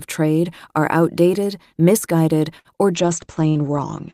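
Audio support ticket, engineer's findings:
Short stall from a late packet at 2.59 to 2.68 s: sound held about 53 ms, then resumes at the same point with nothing lost. Receive jitter buffer ran dry waiting on a late packet; playout delay grew by about 53 ms.

Call bitrate drop from 3.00 s to end of clip: audio turns rough and muffled. Bandwidth estimate fell, so the Opus encoder dropped from 40 to 14 kbps and narrowed its audio band from 20 kHz to 8 kHz. No recovery before the clip ends.

Burst of packet loss at 3.49 to 3.58 s, inside the low-bitrate stretch: last sound extended and faded for about 65 ms, then playback jumps ahead. Consecutive packets lost or too late. Concealment filled the gap, and about 60 ms of audio is gone.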